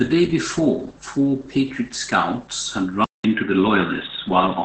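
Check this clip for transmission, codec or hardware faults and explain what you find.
Three faults are present: a steady hum, heavy low-rate speech coding, and a change of input device near the end.

A low, steady drone sits under the speech for the whole clip. This is mains hum at 50 Hz, about 25 dB below the speech. A ground loop or nearby transformer is feeding the power-line frequency into the signal path.

Throughout, the speech sounds muffled, hoarse and faintly robotic, with nothing above roughly 8.5 kHz. This points to Opus voice compression in its SILK mode at a low bitrate, around 10 kbps. The linear-prediction coder quantises the excitation so coarsely that the voice texture breaks down.

Just after "scouts had", at 3.04 s, there is a silence of about 200 ms. After it, the sound turns boxy and dull, with nothing above 3.8 kHz, and the level shifts by around 5 dB. The likely cause is the input switching to a poorer device, one with a narrower band and a quiet noise floor about 55 dB down.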